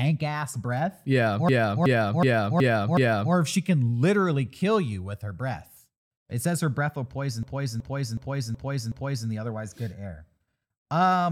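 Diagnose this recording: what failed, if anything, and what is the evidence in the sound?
Twice the speech stutters in a machine-gun pattern, from 1.49 to 3.34 s before "if she can literally" and from 7.43 to 9.29 s between "her breath will poison" and "the otherwise good air". It is a system hang loop at the driver or buffer stage. One 371.52 ms slice repeats five times at 2.69 Hz while the hardware replays its ring buffer, which fits a 16384-sample buffer.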